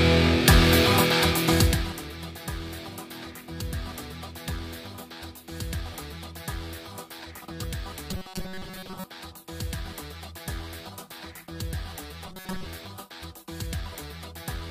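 From 8.11 to 9.04 s, and again from 12.27 to 12.66 s, the sound collapses into a rigid, metallic buzz pitched at 188 Hz that only loosely tracks the original. This is robotic sound from repeated short buffers, likely caused by audio arriving too late: the playback repeats its last fragment, about 5.3 ms long to match that pitch, while most of the real audio in those spans is skipped.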